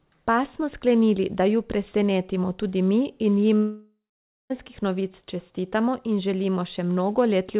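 At 3.56 s the speech just drops out until about 4.52 s, most likely a long network dropout where nothing reached the receiver for close to a second. You hear the last sound stretched into a fading buzz first, then roughly half a second of plain silence before the speech picks up again, with that whole chunk simply missing. All of it sits inside the narrow, under-4 kHz band you'd expect from a G.711 call path.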